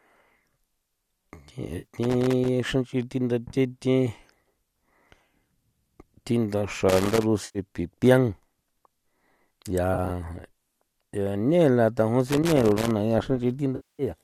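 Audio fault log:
1.78–1.87 s, 7.45–7.59 s, 9.94–10.10 s and 13.76–14.03 s: AAC frame loss with concealment. Parts of the stream go missing, about 60 ms, 100 ms, 50 ms and 230 ms of audio. The decoder fills each gap from the last good spectrum. That is why the sound smears into a noisy, phasey patch. At 9.94 s the loss is broken up over 160 ms, the longest bit about 20 ms. The gap sizes fit 10 ms frames, which matches the low-delay AAC compression that is likely in use.
2.03–2.49 s, 6.89–7.23 s and 12.27–12.91 s: loose connector crackle. Irregular bursts of crackle and scratching break through the sound. A worn or dirty contact makes and breaks as it shifts. Each break chops the signal, and the cuts come through as rough clicks. The first burst ends just before "xra nch'i". The last begins just after "lane la".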